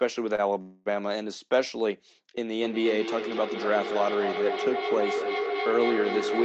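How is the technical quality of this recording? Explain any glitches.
The recording has three distinct faults: two timing glitches early on and a feedback howl that takes over the second half. The audio is band-limited to 8 kHz, which fits a call codec such as Opus at around 20 kbps, with its ordinary coding noise.

From 0.35 to 0.40 s there is a short stall from a late packet. A packet missed its playout slot and the jitter buffer ran dry, so the receiver stretched the last sound by about 28 ms until the data arrived, then resumed from the same point. Nothing is lost, but the sound at that moment is held too long, with a brief buzz or dip, and everything after it plays 28 ms later.

From 0.61 to 0.88 s the call audio freezes. The receiver fills about 246 ms by continuing the last sound as a buzz or hiss that fades without reaching silence, and then playback picks up where it stopped. No audio is dropped; a gap has been inserted instead. 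The likely cause is packets held up in transit long enough to empty the jitter buffer.

From 2.52 s to the end there is feedback howl. Two devices in the same room are on the call, and the loop from loudspeaker back into microphone gains level on each pass. The repeats grow rather than decay and narrow to a tone near 400 Hz, with the loop's round-trip delay at roughly a fifth of a second. It peaks at about 4 dB below the speech level and never breaks off before the recording ends.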